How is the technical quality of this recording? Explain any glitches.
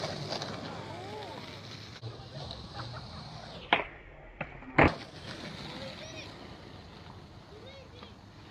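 The technical quality of this recording is sound, with no glitches to explain.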